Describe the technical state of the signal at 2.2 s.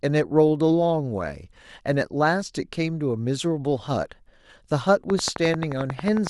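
At 2.2 s the signal is intact, with no dropout, distortion, or other fault audible at that point.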